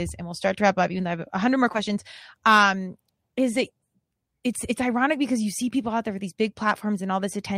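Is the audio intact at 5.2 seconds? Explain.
Yes, the speech at 5.2 seconds plays through intact, with no dropout, click, distortion or other fault at that moment.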